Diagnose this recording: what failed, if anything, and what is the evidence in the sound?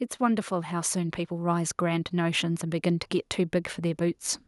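Automatic gain rising runs from 0.19 s to 3.12 s, a fault in the call-processing stage. Across those three seconds the speech and the background noise swell together by about 6 dB, with no step or click. That shared, slow lift is the evidence: the automatic gain control judged the input too quiet and eased its gain upward over several seconds, so everything in the signal path, the room noise included, grew louder at once.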